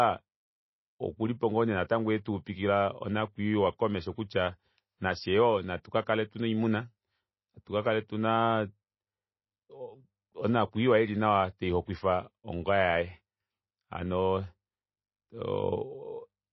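Throughout: likely MP3 compression, consistent with about 24 kbps. The treble stops at 5.8 kHz and weak frequency lines flicker between frames, making the speech watery and swirly.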